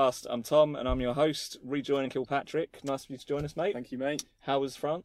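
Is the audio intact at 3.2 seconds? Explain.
No. From 2.17 s to 5.04 s, which includes 3.2 s, the sound runs hurried, about 111% of normal speed, with its pitch unchanged. This is a jitter buffer speed-up. The receiver's buffer had accumulated more audio than its target, so it trimmed short slices one or a few pitch periods long, again and again, to bring the delay back down. Over this stretch those cuts remove roughly 0.3 s.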